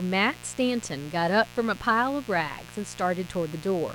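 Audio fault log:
Throughout: mains buzz. Sharp switching spikes from a 60 Hz supply, such as a dimmer, a rectifier or an unshielded cable, are leaking into the signal path twice per mains cycle, so a pulse train repeats 120 times a second. Its harmonics stack up from 60 Hz into the kilohertz range, which gives a steady, raspy buzz under the speech rather than a smooth hum, sitting roughly 20 dB below it across the whole clip.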